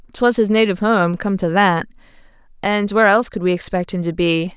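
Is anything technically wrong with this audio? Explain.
No, nothing technically wrong can be heard here.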